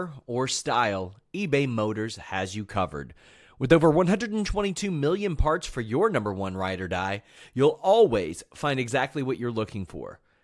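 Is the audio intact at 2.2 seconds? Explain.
Yes, the speech plays through 2.2 seconds without any dropout, glitch or other fault at that moment.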